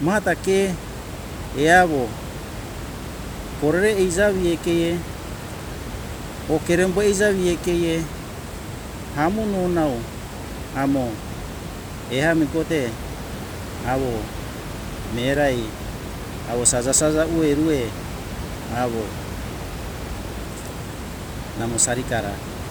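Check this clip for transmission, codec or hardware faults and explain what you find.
No transmission, codec or hardware faults turn up in this speech clip. A room noise sits about 11 dB below the speech, part of the recording space rather than anything added along the way.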